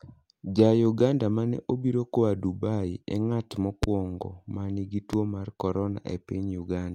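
A speech clip with two loud pops, at 3.83 to 3.86 s, after "e ng'at", and at 5.13 to 5.16 s, after "ma nigi", peaking roughly 20 dB and 15 dB above the speech. Each is a single sharp thump lasting about 26 ms, likely from an electrical pulse such as a switch, static or driver glitch. Unlike a dropout or a digital click, the speech carries on underneath each pop without a gap.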